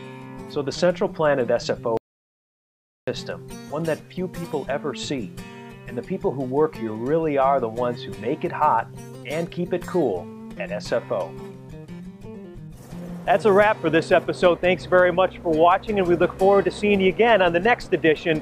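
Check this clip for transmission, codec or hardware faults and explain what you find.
There is one fault, an audio dropout to silence. At 1.97 s the sound cuts off mid-flow. It returns at 3.08 s, so about 1.1 s is missing. The gap is silent, with no room tone or noise floor underneath. That points to the input itself being lost, not just quieted. The likely cause is a brief disconnection, link failure or mute while the recorder kept writing zeros. Whatever happened during that second is gone.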